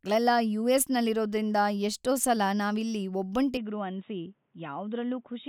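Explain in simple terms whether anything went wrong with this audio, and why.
At 3.57 s the speech suddenly turns duller and slightly quieter, with a faint new hiss, and stays that way to the end. Nothing comes through above 3.8 kHz. This is likely an input switched to a poorer device. Tone, loudness and background change together, with no gap, which a simple filter wouldn't cause.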